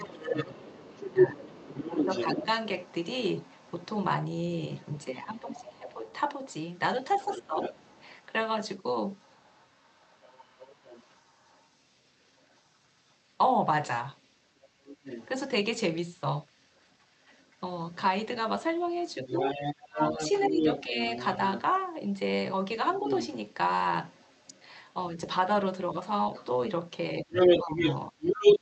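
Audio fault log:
0.0–2.46 s, 5.05–7.58 s, 19.27–20.98 s, 23.0 s, 27.23–28.16 s, speech suppressed in double talk: the main talker dips in level while the far voice is also present. The drops reach about 15, 10, 20, 5 and 15 dB respectively, and cover roughly one and a half seconds, one second, under a second, a brief blip and a fraction of a second. The likely cause is the echo canceller failing to tell near speech from loudspeaker echo and attenuating both.
0.0–24.65 s, 26.34–28.6 s, other side's voice leaking through: a second voice runs under the talker. It sits about 10 dB below the main speech for most of the first stretch, then rises to about 10 dB above it near the end, where it overlaps the last suppression. This is likely residual loudspeaker playback that the echo canceller did not fully remove from the microphone signal. It is carried through the Opus call path, which is band-limited to 8 kHz.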